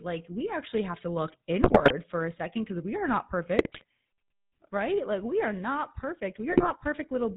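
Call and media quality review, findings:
Buzzy, gravelly roughness throughout, nothing above 4 kHz. Sound points to GSM full-rate codec at 13 kbps: pulse-driven vocal-tract model discarding most excitation detail, bandlimiting hard.

Squawks, pops and gargling bursts at 1.62–1.92 s (after "actually have to look", before "for a second because"), 3.58–3.84 s (after "because we are not"), 6.50–6.71 s (after "we are not"). GSM bit errors: corrupted filter, pitch and gain parameters distorting decoded frames.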